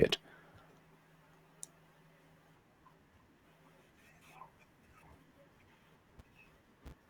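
Throughout the speech, a filter restarted on every block ticks at 188 Hz. Each block, likely 256 samples, starts from silence. The buzz follows the speech level.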